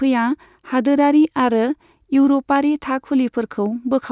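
No technical faults can be heard anywhere in this speech recording. Nothing in the sound points to a dropout, distortion or other transmission or processing problem at any point.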